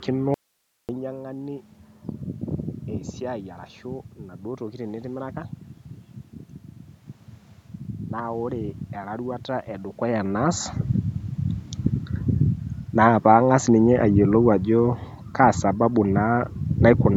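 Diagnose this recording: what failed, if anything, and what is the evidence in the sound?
An audio dropout to a faint residue runs from 0.34 to 0.89 s. About 550 ms of speech abruptly becomes low hiss far below the signal, likely a network or buffer interruption. On the waveform it appears as a flat near-silent block, and on the spectrogram as a faint uniform haze.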